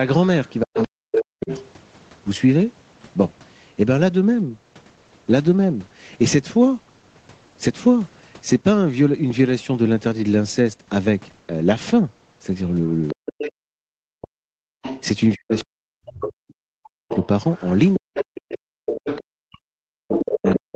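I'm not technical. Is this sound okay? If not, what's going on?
No. Three problems come from a speakerphone-style call setup.

Other side's voice leaking through: from 0.45 to 1.68 s, 12.86 to 13.51 s, and 14.82 s to the end, a second, quieter voice is audible, likely loudspeaker echo the canceller missed.

Speech suppressed in double talk: from 0.63 to 1.5 s and across 13.13 to 20.73 s, the main voice dips or drops out in pieces while that other voice is present, likely because the canceller turned both down together.

Background gated by the echo canceller: the room sound briefly cuts out at 14.77 to 14.82 s and 18.79 to 18.86 s, then returns once the canceller releases.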